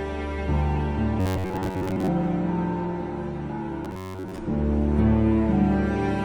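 Robotic sound from repeated short buffers affects the audio from 1.20 to 2.09 s and from 3.85 to 4.38 s, where a rigid metallic buzz at 93.8 Hz follows the original sound only roughly. The likely cause is a segment of about 10.7 ms being replayed for most of each span while real audio is skipped. Unlike mains hum, the buzz is confined to these spans.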